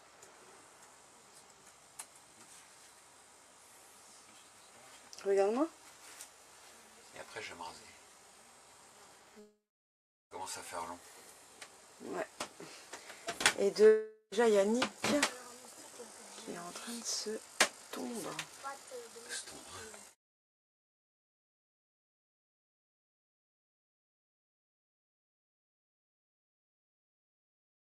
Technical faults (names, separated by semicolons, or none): long network dropout